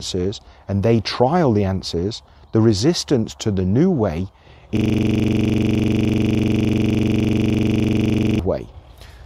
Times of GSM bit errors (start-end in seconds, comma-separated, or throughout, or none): none